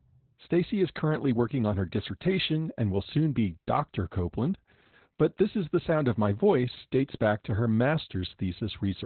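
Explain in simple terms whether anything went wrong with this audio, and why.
Yes, the speech has been squeezed hard by Opus voice compression, start to finish. At this setting it throws away everything above about 4.2 kHz, phone-line style, and roughly sketches the voice, so it sounds muffled, a bit hoarse and faintly robotic throughout.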